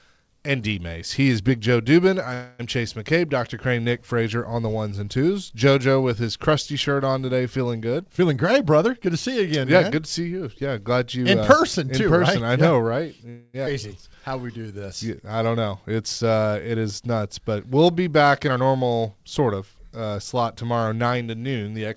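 At 2.34 to 2.61 s a call audio freeze stretches the last sound into a fading 250 ms buzz or hiss, likely from delayed packets draining the jitter buffer; playback then resumes with nothing lost. From 8.0 to 9.79 s a jitter buffer speed-up runs the sound at 114% with unchanged pitch, trimming pitch periods to shed about 300 ms of backlog. A second freeze at 13.29 to 13.56 s fills 243 ms the same way. At 13.66 to 13.68 s a skip ahead drops roughly 150 ms and joins the two sides almost directly. Then, from 13.73 to 14.87 s, a jitter buffer slow-down repeats pitch periods to add 145 ms, running at 88% with drawn-out sounds. From 18.4 to 19.99 s another speed-up runs at 115%, again removing about 300 ms. Throughout, nothing is heard above 8 kHz, which fits a wideband codec such as G.722 at 64 kbps.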